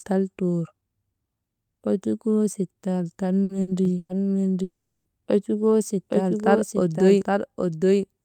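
A speech recording in which three short stutters at 3.43–3.52 s, 3.61–3.70 s and 3.97–4.12 s each hold and fade the preceding sound before the talker jumps ahead, the last ending in a brief silence. This is a burst of packet loss: 60, 60 and 120 ms of audio never arrived and were papered over by concealment. From 3.85 s to the end, a second copy of everything, about 5 dB quieter, trails roughly 0.7 s behind, dry and unreverberant, starting abruptly. This doubled audio track is likely a second capture through a slower path mixed back in. At 4.63–5.08 s the sound smears into a fading hold, then drops to silence for about 0.29 s before resuming further on, the signature of a long network dropout that likely lost 420 ms outright.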